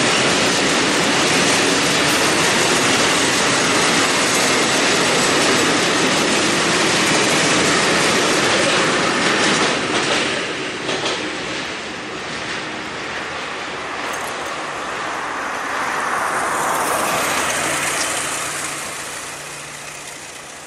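No technical faults can be heard anywhere in the recording. Nothing in the sound points to a problem in the path that carried it.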